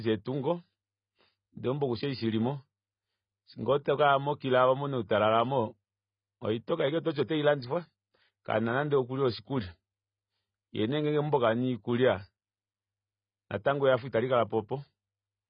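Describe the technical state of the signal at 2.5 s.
At 2.5 s the speech is dull, with nothing above 5 kHz and a smeared, fizzy edge. It runs throughout and is likely AAC compression, with a heavy 16 kbps-style spectrum cut.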